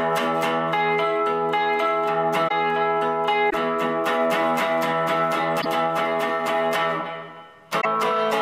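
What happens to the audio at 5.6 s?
At 5.61 s the audio jumps ahead, and a short corrupted stretch runs to 5.66 s, about 56 ms. That matches roughly two frames of about 26 ms each. The likely cause is a broken MP3 bit reservoir. MP3 frames store part of their data in earlier frames. When frames are lost, the next frame reaches back for its data and reads bytes from the wrong frame. Its first moments then decode as garbage.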